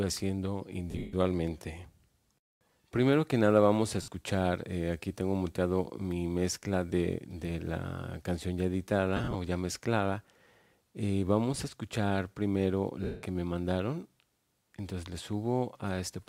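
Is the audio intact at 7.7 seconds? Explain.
Yes, the audio at 7.7 seconds is intact, with no dropout, click, distortion or other fault at that point.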